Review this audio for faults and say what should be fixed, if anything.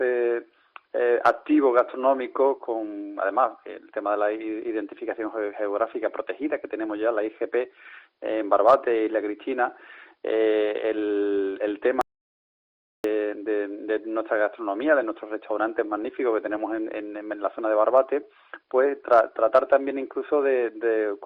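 There's an audio dropout to silence from 12.01 to 13.04 s: about a second of silence, no room tone, likely a lost input or stray mute. Check cables and mute states before recording.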